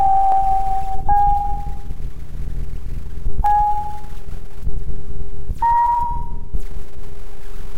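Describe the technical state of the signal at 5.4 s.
At 5.4 s the sound lies within a run of regular clicks from 0.32 to 6.60 s, repeating every 1.57 s. These are likely clock drift buffer slips: two independent clocks disagree by several hundred ppm, so a few dozen samples are periodically dropped or repeated. The steady spacing sets them apart from random dropouts or packet-loss glitches.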